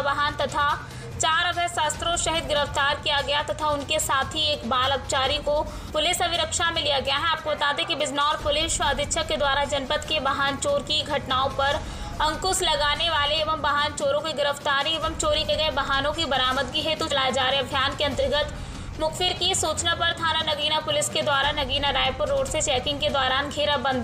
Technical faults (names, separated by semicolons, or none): compressed frames skipped